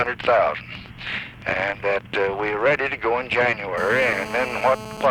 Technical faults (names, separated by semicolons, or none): GSM phone buzz